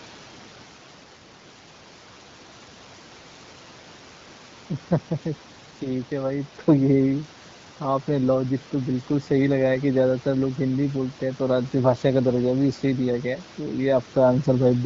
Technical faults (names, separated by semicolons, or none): none